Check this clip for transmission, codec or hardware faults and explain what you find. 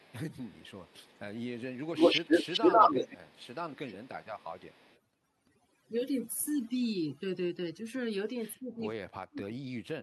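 Several faults are present: noise reduction applied too hard across the whole clip, three stretches of echo leak, and two passages where speech is suppressed during double talk.

Overdone noise removal runs from start to finish. The noise reducer is set too aggressively, so any frequency band near its noise estimate is pulled far down or muted, and quiet speech detail goes with it. The background drops and breaks up into twinkling, chirpy specks. The band tops out around 12 kHz, which fits the Opus call path.

Echo leak appears three times. The likely cause is a loudspeaker at the far end whose echo canceller let part of the microphone pickup through, so a delayed copy of the speech returns. From 0.0 to 1.08 s a faint copy trails by 243 ms, about 30 dB under the speech. From 1.75 to 3.45 s the copy arrives 141 ms late and is about 10 dB louder than the speech itself. From 4.22 to 5.0 s the 141 ms copy returns, faint again.

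Speech suppressed in double talk hits twice, while both sides are talking. The canceller likely cannot separate the local talker from the loudspeaker echo and attenuates both. Between 2.81 and 4.1 s the voice dips and breaks up for roughly a second in total, dropping by up to about 25 dB. From 8.54 s to the end it is pushed down much harder, by as much as about 40 dB, so the speech fades out in pieces.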